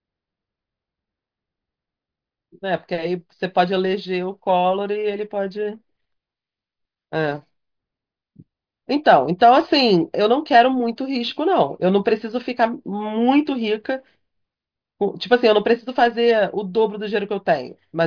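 No technical faults occur at any point in the speech, so there is nothing to place in time order.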